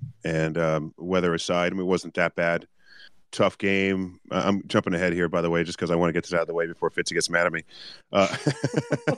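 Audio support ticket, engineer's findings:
Listened through the speech clip in full and nothing stood out, so no symptom to log against any component.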